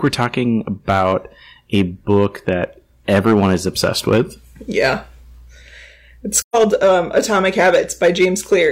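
Hard clipping runs through the whole speech clip. The level going into some stage was pushed roughly 8 dB past what it could pass, so the loudest peaks get sliced flat instead of rounding off. Only a small share of the samples actually hit that ceiling, but each flat top throws off high harmonics, and you hear it as a gritty crackle riding on the louder syllables.

Then from 6.41 to 6.55 s there's an AAC frame loss with muting. Chunks of the coded stream went missing, about 128 ms' worth, which fits three dropped frames, and the decoder filled them with silence. Because the transform windows overlap, the sound fades down into the gap and back up out of it, so you get a soft-edged hole in the audio.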